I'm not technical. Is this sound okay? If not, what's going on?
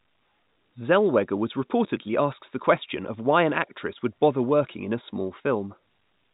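Yes, the speech simply carries the narrow, phone-line sound of ordinary G.711 telephone coding, which passes nothing above 4 kHz, and nothing in it has gone wrong.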